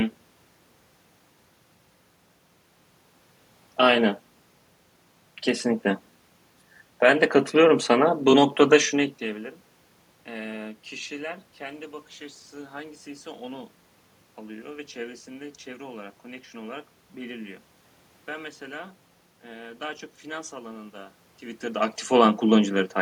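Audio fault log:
No faults heard anywhere in the speech.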